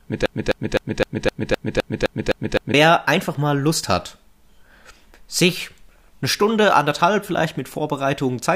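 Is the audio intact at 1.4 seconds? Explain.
No. A broken-record loop runs from the start to 2.74 s, ending just before "einfach mal". One 257 ms fragment repeats exactly, back to back, ten times. A stalled player or stream likely kept resending it, so the speech meant for that span is lost.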